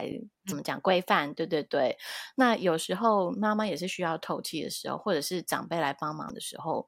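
At 0.51 s and again at 6.29 s, the speech breaks into a brief glitch from damaged data in a compressed stream. The decoder misreads corrupted frames and searches for the next valid header.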